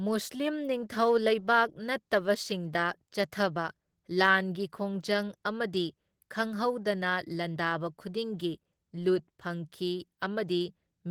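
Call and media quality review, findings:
Opus voice compression, throughout: plainly audible codec damage on speech, band still reaching 20.2 kHz. Fits hybrid SILK-plus-CELT coding near 16 kbps, coarse excitation coding adding hoarse roughness.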